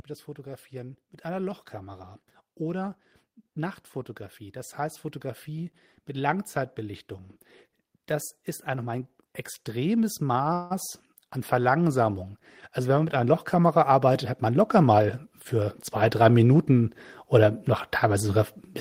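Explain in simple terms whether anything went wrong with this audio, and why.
Yes, a few things went wrong here, some subtle and some you can hear.

First, there's a DC offset throughout the whole 19 seconds: the waveform sits off the zero line for the entire speech recording. You won't hear it as a sound, but it eats into the available headroom, so the audio can clip sooner when it gets loud, and it shows up as steady energy at the very bottom of the frequency range.

Then there's automatic gain rising, three times. From 0.35 to 2.98 s and again from 9.72 to 12.24 s, the level creeps up gently as the gain control decides the input is too quiet. The biggest one runs from 12.75 to 18.49 s, a much bigger swell. In each case the voice and the background noise get louder together, which is the giveaway that it's the processing and not the talker.

Around 10.53 to 10.72 s there's a call audio freeze. 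For about 170 ms the sound doesn't stop; it hangs on the last bit as a fading buzz or hiss before the speech picks up exactly where it left off. That's likely packets held up in transit leaving the jitter buffer empty. Nothing gets lost, but the stream ends up a little behind.

Finally, from 13.90 to 15.62 s there's a jitter buffer speed-up. The receiver trims out tiny slices, roughly 0.15 s in total, to catch up on that delay. The speech runs about 9% fast at normal pitch, so it sounds a bit hurried.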